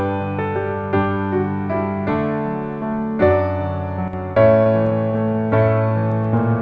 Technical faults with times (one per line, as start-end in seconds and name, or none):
4.08-4.13 one channel drops out
4.64-6.53 repeated stalls (stutter)